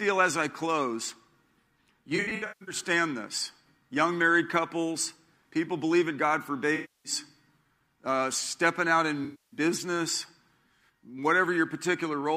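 A speech clip with AAC frame loss with concealment in three spots: 2.16 to 2.75 s, 6.74 to 7.12 s, and 9.24 to 9.60 s. The first is gappy, with about 0.36 s missing in bits across half a second and the longest stretch around 150 ms. The other two lose roughly 0.3 s each. In each patch the decoder fills in from the last good spectrum, so the speech goes smeared, noisy or phasey rather than cutting clean.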